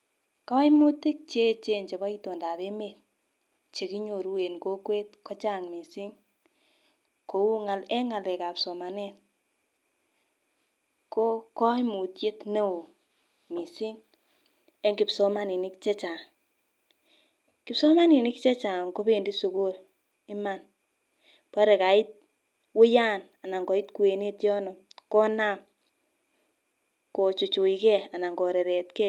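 Speech clip with a lost packet rebuilt from error correction at 0.75–0.85 s: about 60 ms sounds rougher and noisier, consistent with three 20 ms Opus packets replaced by lower-bitrate redundant copies, with no gap.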